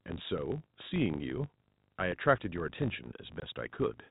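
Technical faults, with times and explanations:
Throughout: filter restarted on every block. A filter in the chain loses its stored state at each block boundary and begins again from silence, so every block opens with a small transient. These repeat as a steady 50 Hz buzz, pointing to blocks arriving fifty times a second, and the buzz rises and falls with the level of the speech. Behind it the G.711 telephone coding limits the audio to below 4 kHz.
3.4 s: packet loss filled with silence. One packet's worth of audio, 20 ms, failed to arrive, and the receiver substituted plain silence instead of concealing the gap. The speech drops out abruptly for that instant, and because the signal is cut to zero and then resumes with no fade at either edge, the hole has hard edges.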